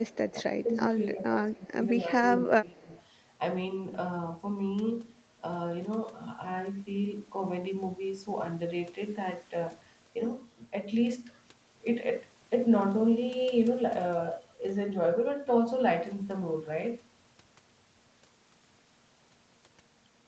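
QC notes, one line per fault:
0.07–0.32 s and 2.69–3.02 s: echo leak. A faint delayed copy of the speech sits behind the talker, trailing by 210 ms. It is roughly 30 dB below the speech. The likely cause is a far-end loudspeaker whose echo canceller let some pickup return down the line.
0.64–0.76 s, 1.05–1.23 s, 1.50–1.77 s and 2.38–2.90 s: speech suppressed in double talk. The talker's level dips in short pieces. The first two dips are shallow, about 5 dB. The last two go deeper, around 15 dB. Likely an echo canceller confusing overlapping speech with echo and attenuating both.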